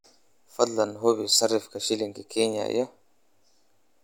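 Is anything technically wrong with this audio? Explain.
No, nothing technically wrong can be heard in this speech recording. There is nothing here that needs to be explained or fixed.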